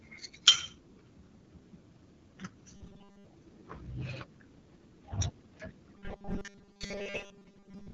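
A speech recording with two faults. Throughout, the AMR wideband (HD Voice) codec is plainly audible. Nothing sits above 7.5 kHz. Speech sounds rough and raspy, which fits one of its lowest rates, around 8.85 kbit/s. The codec models the voice coarsely at that rate and adds shaped noise near the top of the band. From 2.77 to 3.26 s, and again from 5.97 s to the end, there is robotic sound from repeated short buffers. The speech becomes a rigid, metallic buzz at 200 Hz. This is likely caused by the playback repeating a 5 ms stretch while fresh audio arrives late, so most of the real sound there is skipped.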